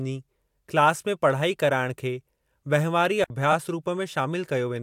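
A digital wireless dropout runs from 3.24 to 3.30 s. For 60 ms the speech simply vanishes into near silence, with a very short fade at the edges and no crackle or noise burst on either side. When the radio link loses too much data to reconstruct the audio, the receiver mutes deliberately, leaving a clean, hard-edged hole in the speech.

Repeated frames follow at 3.52 to 3.54 s, where a single 23.2 ms block of compressed audio is decoded and played one extra time. The block length fits a 1024-sample codec frame at 44.1 kHz. The speech briefly stutters as that slice sounds twice in a row. The duplicate stretches the audio by 23.2 ms.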